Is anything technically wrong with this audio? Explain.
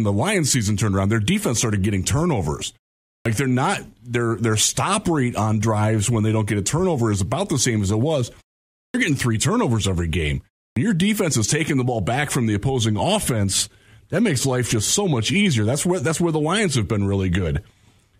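Yes. A clipped start after a pause occurs at 3.20, 8.89 and 10.71 s. After each gap of 0.3 to 0.55 s the output device is still waking, so about 53 to 55 ms of the onset is swallowed and "they're not their their", "getting three turnovers every" and "your defense is taking" jump in abruptly. Muted pauses lose no speech. These lose the first sounds themselves.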